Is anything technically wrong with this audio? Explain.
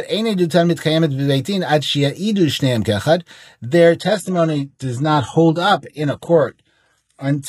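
Yes. From 4.01 s to the end at 7.48 s, the speech shows an adaptive stream at a lower bitrate. The stream switches to a leaner encoding mid-playback, which fits a drop from roughly 96 kbit/s AAC to a 16 kbit/s HE-AAC version. Nothing remains above about 11.8 kHz. Unlike a dropout or buffering stall, the quality change is abrupt but seamless, with no gap or silence.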